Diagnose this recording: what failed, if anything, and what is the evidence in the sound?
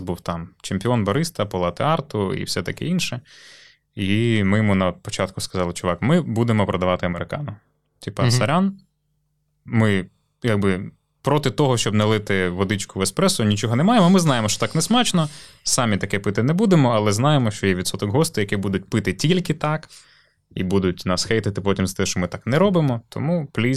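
At 7.13 s the speech level steps down by about 6 dB for 51 ms, then returns at 7.18 s. That abrupt halving is what one channel dropping out looks like after the mono sum, likely from an intermittent contact in the analogue wiring or connector.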